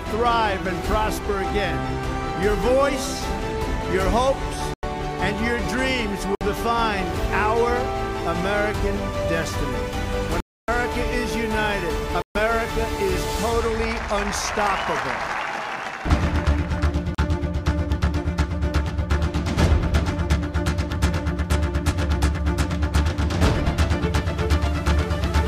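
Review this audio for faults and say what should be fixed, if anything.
Blocks of digital silence at 4.74, 6.35, 10.40, 12.22 and 17.15 s (37 to 279 ms) cut to silence with hard edges, unlike a faded dropout. Prevent it by giving the audio thread larger buffers or higher priority so the output is always filled in time.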